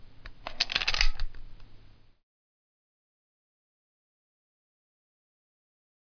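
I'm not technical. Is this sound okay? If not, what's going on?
Yes, this sound is fine, with nothing wrong to hear anywhere in it.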